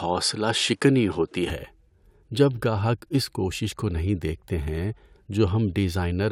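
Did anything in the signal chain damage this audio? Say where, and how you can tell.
Yes. From 0.0 to 1.5 s the speech is band-limited, and a faint new noise floor sits roughly 45 dB below the signal. At 1.5 s the full bandwidth returns with no gap and no obvious level jump. The likely cause is the input switched to a poorer device at the driver stage, a different microphone or headset with a narrower band and its own noise. On a spectrogram, the opening 1.5 s shows a flat ceiling that lifts abruptly. The waveform shows no dropout at the switch.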